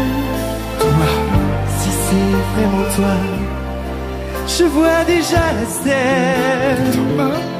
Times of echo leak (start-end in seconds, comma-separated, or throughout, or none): none